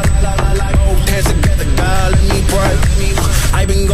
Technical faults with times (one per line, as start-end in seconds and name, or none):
0.00-3.94 USB whine